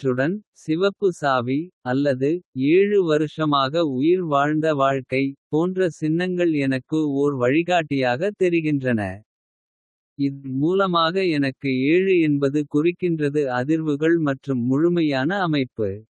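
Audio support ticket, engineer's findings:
Burst of packet loss, 10.32–10.47 s, just before "மூலமாக எனக்கு என்பது குறிக்கின்றது". Receiver concealment extended and faded the last sound for about 116 ms, then resumed with about 120 ms of speech skipped. Network/jitter-buffer side of the Opus call path (band-limited near 12 kHz).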